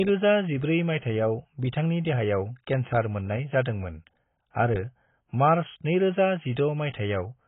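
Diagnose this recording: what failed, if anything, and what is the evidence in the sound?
AAC compression damage runs through the whole speech recording, and the codec stage is the likely point of failure. Nothing is present above 3.8 kHz, so the speech sounds dull and muffled. Sibilants and sustained vowels carry a warbling, smeared texture. The encoder appears to have had too few bits for each frame. It lowered the cut-off and coarsely quantised the frequency lines that remained. The heavy damage points to AAC-LC at roughly 16 kbps.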